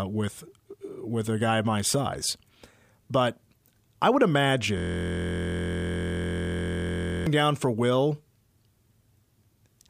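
At 4.78 s the speech freezes into a system hang loop lasting until 7.27 s. The driver or machine stalled while the audio hardware kept replaying the same ring buffer, so a single 23.22 ms slice, which fits a 1024-sample buffer, repeats over a hundred times. The effect is a steady buzz at 43.1 Hz. The waveform shows identical periodic blocks, and the spectrogram shows evenly spaced harmonic lines at multiples of 43.1 Hz.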